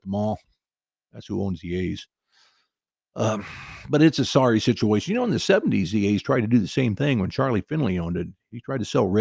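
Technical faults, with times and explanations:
No technical faults can be heard in this speech recording.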